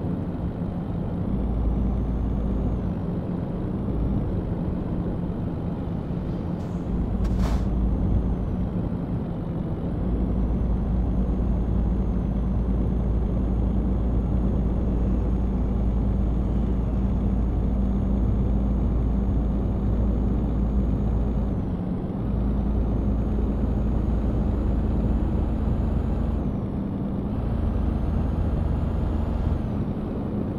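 Nothing goes wrong here: the audio carries on steadily with no dropouts, glitches or distortion anywhere along the way.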